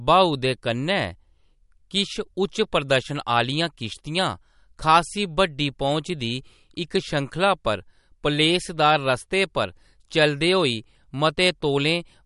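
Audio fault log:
throughout, MP3 compression: nothing above 11.2 kHz and a plainly watery, swirly texture, likely from a starved MP3 encoder, which fits roughly 48 kbps.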